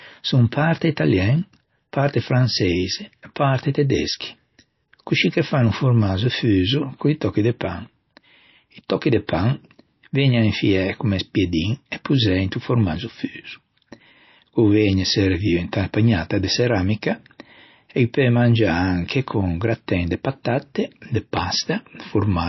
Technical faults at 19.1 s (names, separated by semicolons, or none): MP3 compression